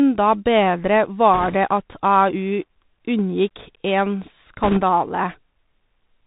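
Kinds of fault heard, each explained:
Bluetooth CVSD headset codec: This is the old narrowband headset codec, which tracks the waveform one bit at a time, just saying up or down, with a step size that keeps adjusting. The whole speech clip sounds like it went through a 64 kbps CVSD link. Everything above 4 kHz is gone, so it's boxy and phone-like. The s sounds come out scratchy, louder bright bits smear where the step can't keep up, and a grainy hiss sits under the voice the whole way through.
bit errors on a Bluetooth voice link: Here some of those up/down bits got flipped in transit. Because each bit only nudges the signal a little and the errors fade out, you don't get sharp clicks, just a brief rushing crackle over the speech. There are two bursts. The first, from 1.34 to 1.55 s, is milder and sounds like an error rate of roughly 2 percent. The second, from 4.63 to 4.80 s, is rougher, closer to 5 percent.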